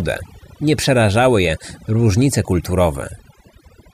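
From start to finish the speech carries overdone noise removal. A noise reduction stage was pushed too hard, so any frequency band sitting close to its noise estimate gets cut deeply or switched off, and the softer parts of the voice are cut with it. Between phrases the background drops to near silence dotted with twinkling specks. On a spectrogram the gaps look dark and sprinkled with isolated bright dots, and the speech harmonics appear patchy and full of holes.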